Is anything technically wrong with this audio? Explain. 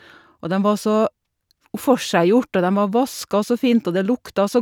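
No, no technical faults heard.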